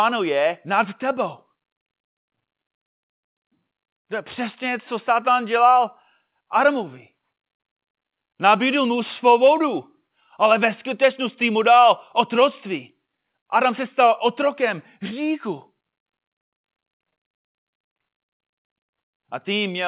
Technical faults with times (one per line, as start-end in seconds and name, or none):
none